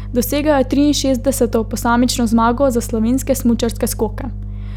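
A speech recording with mains hum running from start to finish: a steady 50 Hz tone, plus its low harmonics, sitting only around 10 dB below the speech, so it is plainly audible under every phrase and in the gaps between them. The power line is leaking into the signal path, which points to a ground loop between connected equipment or to a transformer or power supply too close to the cabling or microphone.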